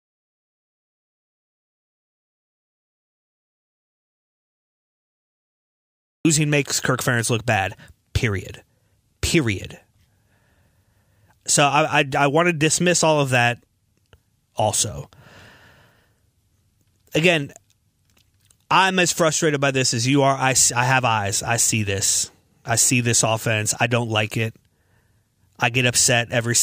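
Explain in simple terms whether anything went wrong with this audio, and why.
The clip opens in dead silence, with no background hiss at all, until the speech arrives at 6.25 s. That's an audio dropout to silence, likely from the input being disconnected or muted.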